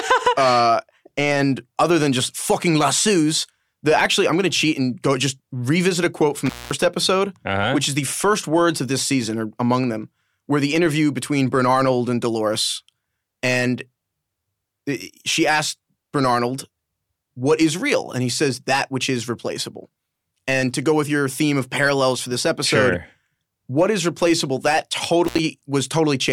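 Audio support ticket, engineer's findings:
Intermittent contact: speech drops out with edge crackle and faint hiss at 6.46 s after "revisit a quote from" (about 0.21 s) and at 25.25 s after "what is replaceable that" (about 0.07 s). Loose plug or cable briefly opening.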